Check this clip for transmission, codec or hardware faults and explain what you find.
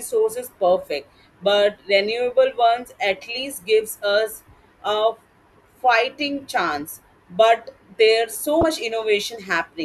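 One fault appears, near the end. From 8.60 to 8.63 s, damaged data in a compressed stream corrupts a frame. The decoder loses sync and resynchronises, leaving a brief glitch in the speech.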